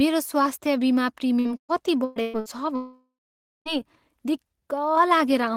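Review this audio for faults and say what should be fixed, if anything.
Repeated packet loss (robotic sound) runs from 1.39 to 2.49 s: five gaps, the longest 119 ms, each patched by stretching the previous sound, so about 42% of that span is filler. On a spectrogram, smeared, frozen harmonic blocks interrupt the speech. Enabling forward error correction and a deeper jitter buffer would prevent this.

From 2.76 to 3.69 s the speech cuts out. A fading buzz continues briefly, then about 0.54 s of silence follows before audio resumes with that stretch missing, likely a long network dropout. The waveform shows a decaying tail into a flat line. A more stable connection or redundant transmission path would prevent it.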